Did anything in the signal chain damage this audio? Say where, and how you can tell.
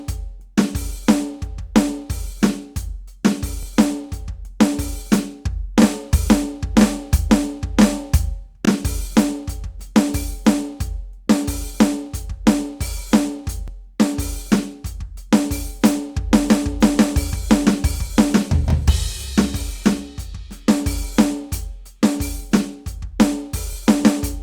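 Yes. The music shows overlapping chunks at the buffer or block-processing stage. Short stutters occur at 8.65–8.68 s, 13.68–13.70 s, 18.70–18.73 s and 23.73–23.75 s, spaced about 5 s apart. At each join, about 25 ms of audio plays twice, heard as a brief click or hiccup. The regular spacing shows the signal was handled in 5-second blocks, each starting 25 ms before the previous one ended.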